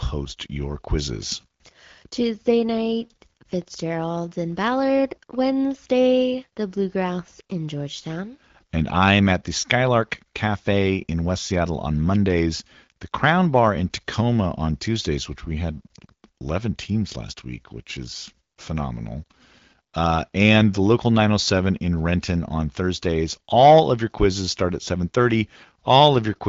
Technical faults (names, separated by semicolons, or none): none